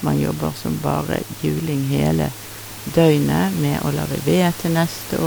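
The speech signal shows no technical faults, with only the room's own background noise sitting about 15 dB below the voice as part of the recording.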